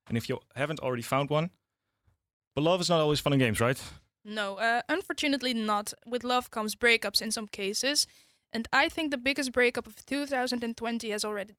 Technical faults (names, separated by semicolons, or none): none